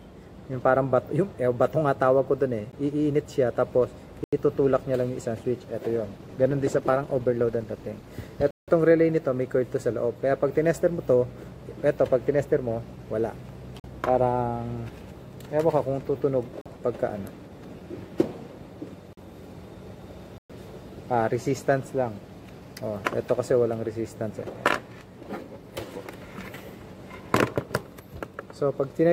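At 2.72 s and 4.24 to 4.33 s, blocks of digital silence cut the sound. Output samples were zeroed, likely because the buffer was not filled in time. The first is a tick. The second is an 85 ms hole, which fits a 4096-sample block.

From 5.96 to 8.17 s, a call bitrate drop takes the encoder from 96 to 17 kbps. Coarser coding makes the sound rough and watery. The high frequencies thin out. It stays at the low rate for about 2.1 s.

More silent blocks follow. At 8.51 to 8.68 s there is a 171 ms gap, fitting 8192 samples. Gaps of 43 ms fall at 13.80, 16.61 and 19.13 s. A 115 ms gap falls at 20.38 to 20.50 s.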